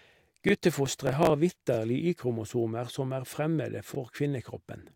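Speech, with two kinds of playback fault. A repeated buffer occurs three times, at 0.49–0.51 s, 1.74–1.77 s and 3.95–3.97 s: new audio arrived late, so the device replayed its last 23 ms block once, which fits a 1024-sample buffer, producing a brief stutter with a hard join. From 0.86 to 1.30 s, processor overload crackle: an overloaded processor missed about fifteen deadlines on very small buffers, around 1.5 ms each, skipping them and leaving a gritty burst of crackle over the speech.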